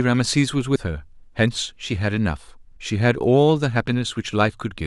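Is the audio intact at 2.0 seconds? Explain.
Yes, the speech at 2.0 seconds plays through intact, with no dropout, click, distortion or other fault at that point.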